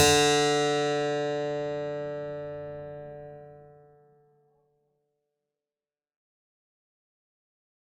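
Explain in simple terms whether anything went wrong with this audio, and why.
Nothing went wrong with this music clip. From around the midpoint, roughly three and a half seconds in, the level fades smoothly out to the very end with no click or sudden cut, just as an editor would finish a track.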